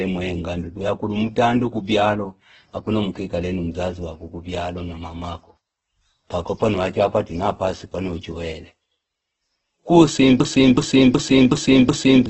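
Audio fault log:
throughout: Opus compression, likely the cause of the heavy damage heard across the whole clip. The sound has a rough, grainy texture in place of clean tone, and bands starved of bits are filled with noise or folded copies of lower bands rather than left empty. On a spectrogram, energy stops sharply at 8.2 kHz, a wideband limit, and harmonics above a few kHz smear into noisy patches. The degree of damage fits a very low bitrate, around 12 kbps.
10.40 to 12.26 s: system hang loop. The computer or driver stalled while the sound hardware kept replaying the same buffer. One 0.37 s slice repeats exactly five times at about 2.7 Hz, heard as a mechanical stutter, and about two seconds of fresh audio never arrive. The waveform shows identical blocks tiled end to end with a hard seam at each joint. The spectrogram shows the same pattern copied in vertical stripes. The loop length fits a 16384-sample buffer.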